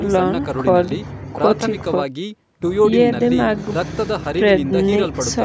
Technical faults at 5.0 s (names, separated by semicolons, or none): none